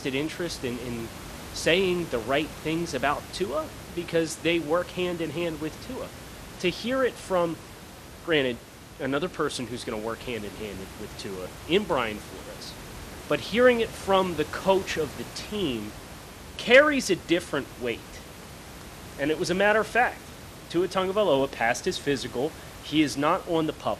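MP2 compression artefacts run from start to finish of the speech, the likely result of MPEG Layer II coding at a low rate, consistent with something near 80 kbps. Layer II divides the signal into 32 equal sub-bands and shares out a limited bit budget, so upper bands switch on and off while the remaining ones are coarsely quantised. The speech sounds dull, with plainly audible gurgling, granular distortion laid over it and over the room noise, which sits about 16 dB below the speech.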